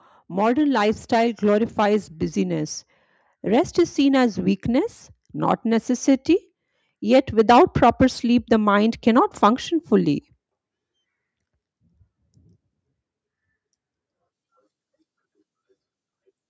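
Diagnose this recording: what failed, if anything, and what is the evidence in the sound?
Automatic gain rising in the call processing: from 0.27 to 2.73 s and again from 7.0 to 10.23 s, the speech and background noise swell together by about 5 dB. The AGC judged the input too quiet and slowly ramped its gain. The band stops at 8 kHz, normal for call microphone processing.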